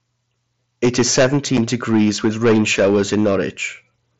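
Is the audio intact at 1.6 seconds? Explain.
No, not quite. Right around 1.57 s there's unconcealed Bluetooth headset packet loss: about 7.5 ms of audio simply drops out, which fits a single lost packet between headset and phone, with nothing filled in. You hear a tiny hole with hard edges that can tick or click.

The moment is also hit by the hard clipping that runs through the whole clip. The signal is pushed about 14 dB past what the chain can pass, so a small share of peaks get sliced flat. Those flattened tops throw off high harmonics, giving a harsh, crackly fuzz on the louder bits.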